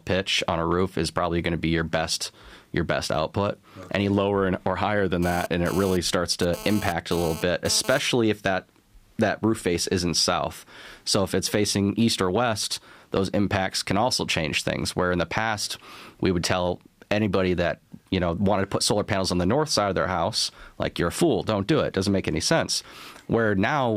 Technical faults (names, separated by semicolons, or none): GSM phone buzz